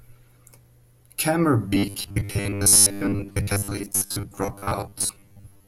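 From 1.68 s to the end, the speech takes on robotic sound from repeated short buffers: a rigid, metallic buzz at 100 Hz that roughly tracks the words. The likely cause is starved playback looping a 10 ms fragment, with most of the real audio skipped.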